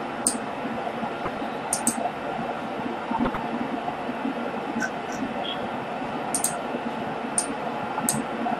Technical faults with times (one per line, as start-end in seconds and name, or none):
0.00-8.60 MP2 compression
1.21-1.37 DAB burbling
3.06-3.37 DAB burbling
5.13-5.17 DAB burbling
7.97-8.00 DAB burbling